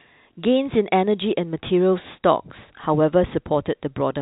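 No technical faults are audible.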